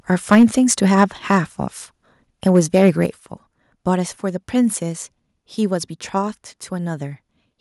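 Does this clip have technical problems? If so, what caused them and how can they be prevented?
Yes. There's harsh, crackly distortion on the loudest speech at 0.12 to 0.44 s, 0.71 to 1.04 s, 1.3 to 1.38 s and 2.46 to 3.04 s. That's most likely microphone overload. The peaks went past the converter's ceiling, by about 8 dB in the first burst and about 3 to 5 dB in the others, so their tops got sliced flat. The first one is the worst, with about 7% of its samples flattened. To prevent it, set the mic input lower so the loudest syllables stay under full scale.

You can also hear the whole level, voice and background together, drop suddenly twice. It's a small dip of about 2 dB at 0.35 s, in the middle of that first distorted burst, and a bigger one of about 6 dB at 3.06 s, right after the last one. That pattern points to the call software likely turning the microphone volume down in steps after it noticed the clipping. 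If the input gain is set sensibly from the start, the software has no reason to step it down mid-call.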